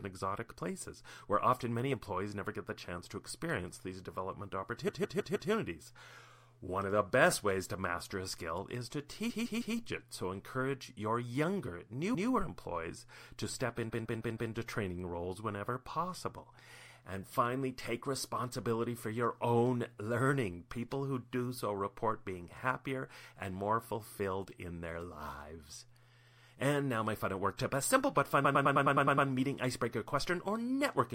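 Repeated frames show up at 4.87, 9.29, 12.14 and 13.89 s, where a 157 ms slice of speech replays up to four extra times, and at 28.44 s, where a 105 ms slice loops eight more. The same compressed block gets decoded again, so it stutters.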